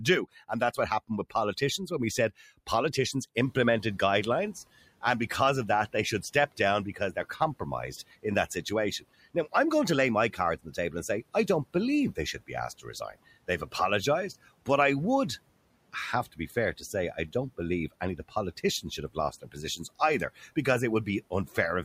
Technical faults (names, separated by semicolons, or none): speech cut by the noise suppressor; noise suppressor catching up